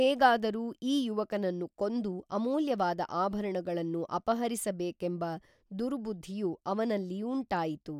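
No technical faults can be heard in this recording.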